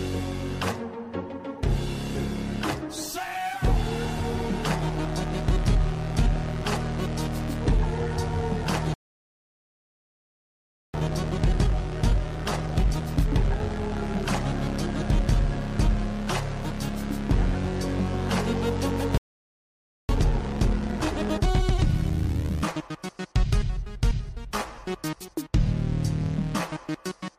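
At 8.94 s the sound cuts out in mid-flow and stays silent for 2 s, resuming at 10.94 s. This is a playback stall, likely the player running short of data or its output thread being blocked. From 10.94 to 13.94 s the audio sounds hurried but keeps its normal pitch. This time-compressed catch-up plays the backlog at 1.15 times speed by removing small slices and cross-fading across the gaps. A second stall silences the sound from 19.18 to 20.09 s, about 0.91 s, again likely from starved or blocked playback. A faster catch-up at 1.25 times speed follows from 20.09 to 23.09 s.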